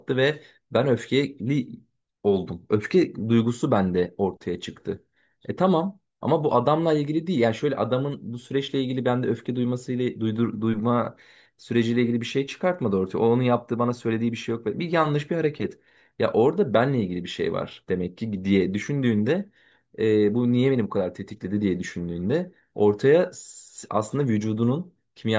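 No technical faults can be heard anywhere in this speech.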